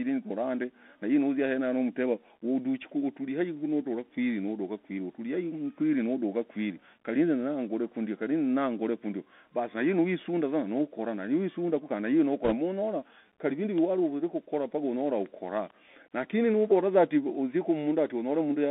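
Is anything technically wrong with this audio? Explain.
Yes, there are two problems, both tied to a Bluetooth headset path.

The whole clip goes through a Bluetooth CVSD headset codec, and the damage is plainly audible. The speech sits in a telephone band of about 200 Hz to 3.5 kHz, which fits a 64 kbps CVSD link. CVSD sends just one up-or-down bit per sample with an adapting step, so quick high-frequency energy outruns it. You hear scratchy s sounds, some grit on louder bits, and a fine granular hiss underneath.

Then from 12.44 to 12.55 s there are bit errors on the Bluetooth voice link, at a rate of a couple of percent. Across that tenth of a second the damage looks like it spans a couple dozen frames. In CVSD every bit carries the same small weight and the decoder recovers fast, so a flipped bit doesn't make a sharp click. Instead that stretch gets a short burst of rushing, crackly noise laid over the speech.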